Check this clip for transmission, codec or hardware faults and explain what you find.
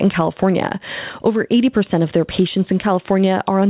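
One fault runs the whole length of the clip, gain pumping. Throughout, the gain swings by around 10 dB. The likely cause is input gain set far too high with a fast limiter clamping every peak, which leaves the sound squashed. Separately, the narrowband call path, which sounds like G.711 at 64 kbps, leaves nothing above 4 kHz.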